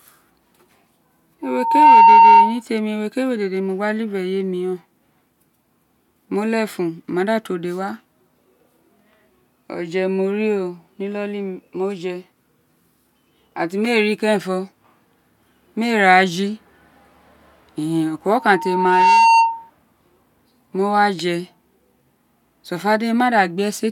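Loudspeaker feedback squeal appears twice in the speech, from 1.43 to 2.62 s and again from 18.32 to 19.70 s, both times at 915 Hz. The microphone is picking up its own loudspeaker, and at that frequency the loop gain passes unity, so the tone feeds itself. It swells from nothing in under half a second the first time and about two-thirds of a second the second time, peaking around 10 dB above the speech as a piercing steady whistle before cutting off.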